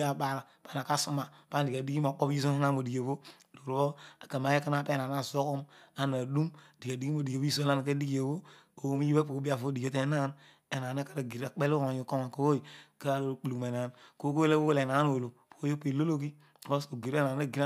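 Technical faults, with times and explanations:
Nothing technical stands out in this bit of speech, so there's no fault to list here.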